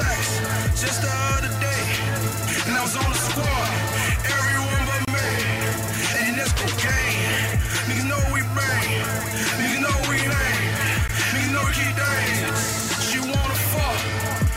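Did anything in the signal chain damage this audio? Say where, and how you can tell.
Yes. There is a gap at a join of encoded pieces at 5.05 to 5.08 s and again at 11.08 s. This is codec-stage damage. The audio was encoded in separate pieces, about 6 s apart, and butted together untrimmed. Each join keeps the encoder's start-up delay and last-frame padding as silence, about 27 ms and 16 ms here. Continuous sound drops out with smeared edges, then resumes exactly where it stopped.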